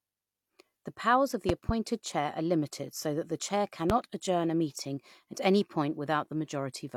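A loud pop pair at 1.49–1.72 s and a single pop at 3.90–3.92 s, likely voltage spikes, appear as tall waveform spikes and vertical full-band spectrogram lines.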